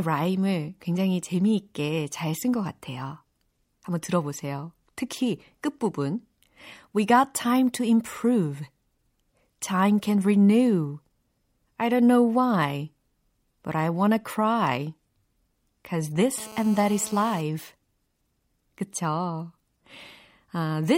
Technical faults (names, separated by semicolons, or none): GSM phone buzz